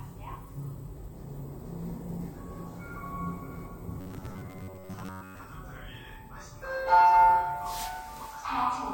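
Everyday sounds, where from 4.01 to 5.44 s new audio likely arrived too seldom, so short buffers of about 10.7 ms were replayed in place of most of the real material. This is robotic sound from repeated short buffers: the loop imposes a rigid 93.8 Hz metallic buzz over the sound.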